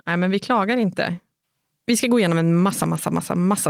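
Nothing goes wrong in this short bit of speech; there's no glitch, dropout or distortion to point to anywhere along the way.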